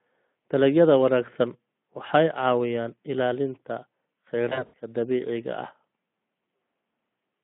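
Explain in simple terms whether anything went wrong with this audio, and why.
From 4.50 to 4.74 s, VoIP packet loss concealed by the speech codec: lost packets left gaps, so the decoder guessed, smearing the speech into a fading buzzy or noisy sound before "dabiiciga ah".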